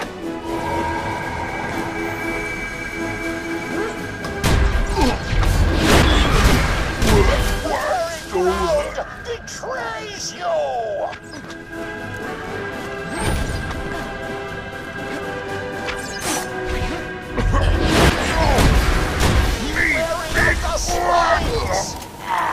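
No technical faults occur at any point, so there is nothing to describe in time order.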